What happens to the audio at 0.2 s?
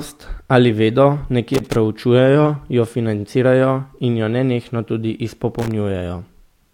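Nothing goes wrong at 0.2 s; the speech there plays through intact, with no dropout, click or distortion.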